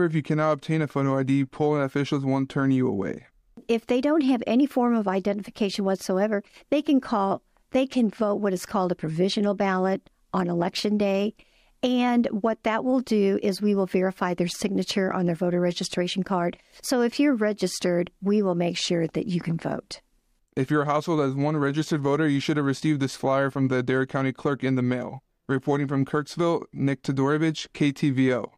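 No technical faults can be heard anywhere in the recording; the signal stays steady and intact throughout.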